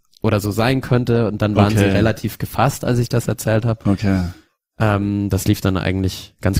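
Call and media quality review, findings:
Adaptive stream starting at a low bitrate, 0.0 to 5.1 s: dull, smeared speech with obvious codec artefacts, then a sudden jump in clarity with no gap, just before "das lief". Sounds like the player opened on a low rung, roughly 24 kbit/s Opus, then stepped up toward 64 kbit/s.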